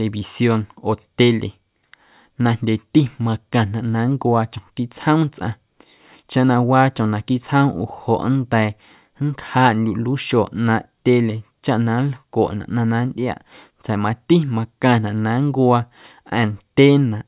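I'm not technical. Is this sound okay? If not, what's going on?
Yes, this sound is okay. Nothing in this speech recording points to a technical problem that needs fixing.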